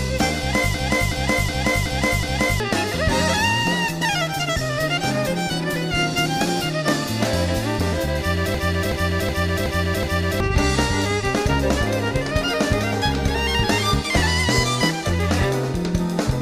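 A stuttering, machine-gun repetition interrupts the audio twice, from 0.74 to 2.60 s and again from 8.55 to 10.40 s, each time looping the same 0.37 s fragment five times at about 2.7 Hz. This is a system hang loop: the computer or driver stalled while the sound hardware kept replaying its ring buffer, which fits a 16384-sample buffer. Roughly two seconds of audio is lost in each episode.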